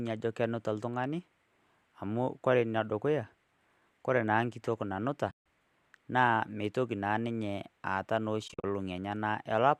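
At 5.31 to 5.44 s the speech softly fades into silence and back, and at 8.48 to 8.64 s it drops out in several brief gaps, the longest about 50 ms. This is AAC frame loss with muting: missing frames were decoded as silence, with overlapping windows smoothing each edge, and the light graininess of the speech is likely from low-delay AAC compression.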